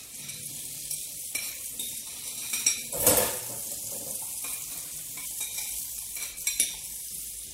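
At 5.21 to 5.25 s the sound jumps abruptly ahead with a small blip. The likely cause is a stream segment skipped, leaving a stretch of audio missing.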